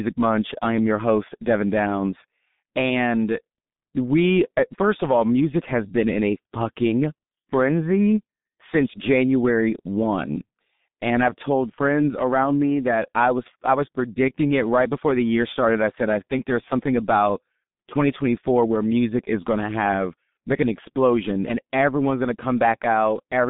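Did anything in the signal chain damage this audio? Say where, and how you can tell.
Yes, at the codec stage: a G.723.1 codec muffles and roughens the speech throughout. On a spectrogram, energy stops hard near 3.8 kHz and thins below 150 Hz, with smeared consonant bursts. This heavy damage fits a very low bitrate around 6.3 kbit/s.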